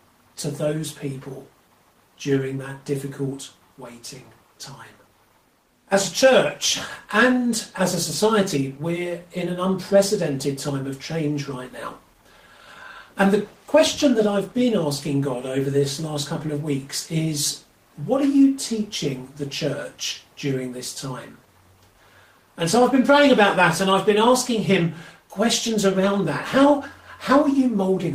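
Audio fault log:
Nothing stood out on a careful listen to the recording.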